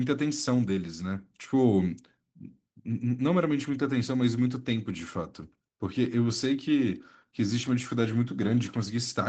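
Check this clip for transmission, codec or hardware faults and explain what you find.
No faults found here.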